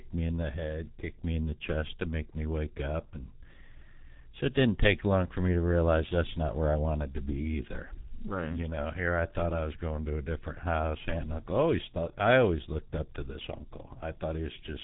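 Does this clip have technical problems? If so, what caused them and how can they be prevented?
Yes. The speech carries heavy G.723.1 codec damage from start to finish. Nothing is heard above about 3.8 kHz, so it sounds muffled and boxed in. The codec models the voice in 30 ms frames and updates that model slowly. Fast changes get smeared, which blurs consonants and adds a hoarse, buzzy edge. The coarseness fits the 6.3 kbit/s mode. To prevent it, record or transmit with a wideband or higher-bitrate codec such as Opus.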